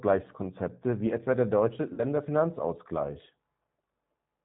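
Speech coded through the G.729 codec throughout, with nothing above 4 kHz and a rough, slightly synthetic quality that points to its 8 kbit/s mode; the vocal-tract and pitch model rebuilds each 10 ms frame from a few pulses, so the damage is plainly audible. From 1.94 to 2.05 s there is VoIP packet loss concealed by the speech codec: about 40 ms is missing, which fits two lost packets. The decoder stretches the last pitch and filter into a sound that fades, and the voice stays weak briefly after packets resume.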